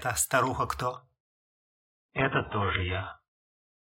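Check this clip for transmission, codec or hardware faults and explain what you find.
There is one fault: an adaptive stream at a lower bitrate, from 0.96 s to the end. The connection slowed, so the player switched abruptly, with no gap, to a much lower-bitrate version. Codec artefacts rise and nothing above 3.7 kHz remains, which fits a drop to a very low AAC bitrate.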